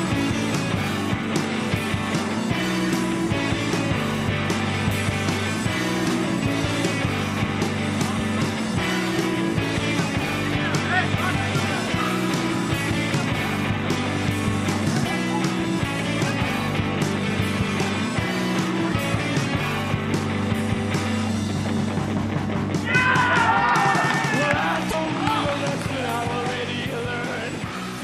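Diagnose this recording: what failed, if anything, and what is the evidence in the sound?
A brief glitch breaks through at 24.88 to 24.94 s, lasting under a tenth of a second. The failure sits at the codec stage: damaged data in a compressed stream. Corrupted bytes at that point in the file left the decoder unable to interpret the frames there correctly, so it output garbage briefly, lost sync, and recovered once it found the next valid frame header.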